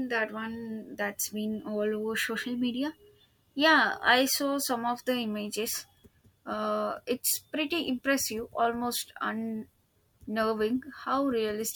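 No technical faults can be heard anywhere in this speech recording. There is nothing to time or explain.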